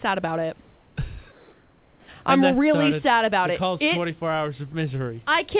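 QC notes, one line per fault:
1.32 to 2.08 s, comfort noise in place of the background: for 0.76 s the room's real background, sitting about 35 dB under the loud parts, turns into a flat, featureless hiss about 2 dB quieter, likely the sender pausing transmission while the receiver fills in synthetic noise.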